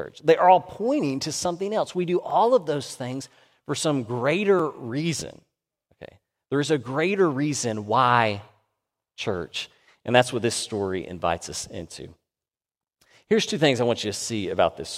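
A speech recording in which the program likely twice failed to deliver audio in time and left blocks of digital silence: about 0.32 ms at 2.30 s and 1.88 ms at 4.59 s. Each abrupt drop to silence and return is heard as a tick or dip.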